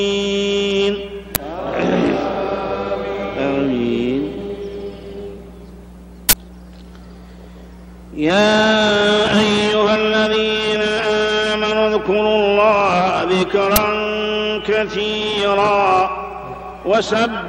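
A buffer was played out before any audio had been written into it, an uninitialised buffer, so leftover memory came through as samples. This happens at 1.35 s and 13.76 s as 10 ms blasts, each a loud crack, and at 6.29 to 6.33 s for 40 ms, a burst of digital noise.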